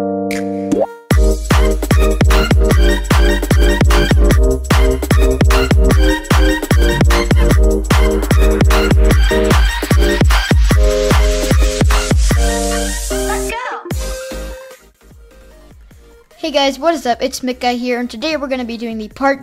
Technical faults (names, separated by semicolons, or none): none